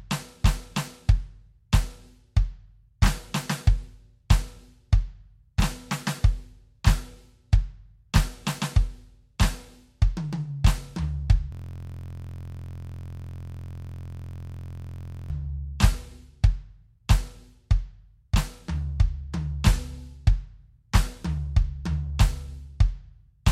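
A system hang loop runs from 11.52 to 15.3 s in this music clip: one 23.22 ms slice repeats exactly, well over a hundred times, producing a steady 43.1 Hz buzz. The system froze while the audio hardware kept replaying a ring buffer, which fits a 1024-sample buffer.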